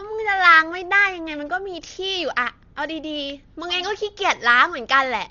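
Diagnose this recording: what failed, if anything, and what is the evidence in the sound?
Dolby Digital compression, at the codec stage, runs throughout: the speech is dull with nothing above 7 kHz and a rough, fluttering noise around tones. The damage is heavy, which fits a likely starved AC-3 encoder around 40 kbps that narrowed the band and left many frequency lines to dither fill.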